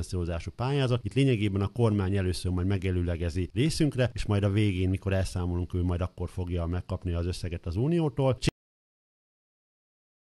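A cut-off end: the final buffers were never written or played, so at 8.49 s the sound halts mid-event and drops abruptly to digital silence without decay.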